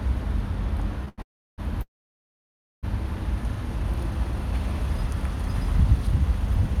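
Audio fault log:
1.09 to 1.20 s, short stall from a late packet: the sound is held for about 90 ms, a brief smeared stretch with a faint buzz. The next packet arrived late, the jitter buffer ran dry, and the receiver extended the last sound until it came. Playback then resumed from the same point, so nothing is lost and everything after runs about 90 ms later. Unlike a freeze, there is no silent stretch, only a short hold.
1.22 to 1.60 s and 1.82 to 2.85 s, call audio freeze: the sound stops and drops to near silence, for about 330 ms in the first freeze and about 960 ms in the second, with only a short fading tail at each onset. The likely cause is packets held up in transit, which emptied the jitter buffer. The audio then picks up exactly where it stopped, adding about 0.36 s and 1.0 s of delay. Nothing is missing, which separates this from a dropout that skips ahead.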